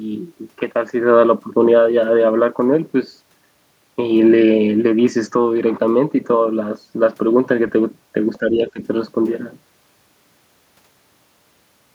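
From 8.39 to 8.8 s the speech sinks by around 15 dB: speech suppressed in double talk, likely an echo canceller turning down both sides of overlapping talk.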